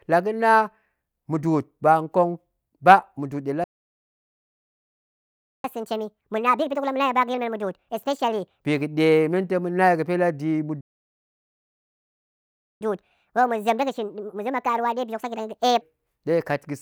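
At 3.64 s the speech cuts to silence for 2 s, a playback stall, likely the player running short of data or its thread blocking. From 5.64 to 8.64 s comes catch-up at higher speed: the backlog plays at 1.5x, pitch raised about seven semitones, before settling. The same pattern repeats, a 2 s stall from 10.81 s followed by 1.5x catch-up from 12.81 to 15.81 s.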